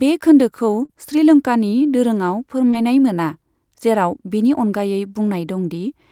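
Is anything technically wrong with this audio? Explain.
Yes, there are two kinds of network-loss damage in this speech clip.

At 0.85 to 0.91 s, just before "श्रीलंकानि दोरोंआव", there's short concealed packet loss. About 40 ms of audio never arrived in time, and the receiver covered roughly 33 ms of it by extending the previous sound before blending back in. You hear that as a brief smear or wobble.

A second short concealed packet loss falls at 2.71 to 2.75 s, right after "खोन्दोखौ श्रीलंकानि दोरोंआव", where about 20 ms was patched the same way and leaves a brief smear.

Overlapping that, from 2.73 to 2.75 s, is a lost packet rebuilt from error correction. About 20 ms, which fits a single lost packet, was restored from the low-bitrate backup copy carried in the following packet. There's no gap, but that sliver sounds rougher and noisier than the audio around it.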